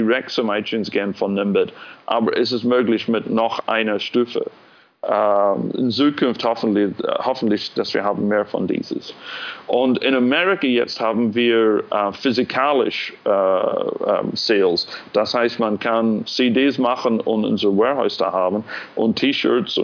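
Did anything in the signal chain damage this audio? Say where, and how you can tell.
No, nothing along the signal chain has left an audible mark: the level, timing and frequency content stay continuous and intact across the whole recording.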